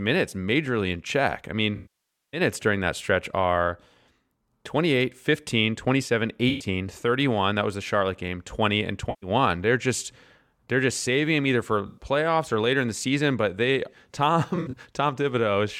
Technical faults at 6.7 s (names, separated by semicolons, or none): AAC frame loss with concealment